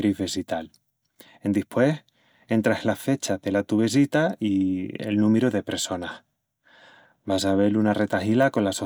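Nothing stood out on listening to this speech recording.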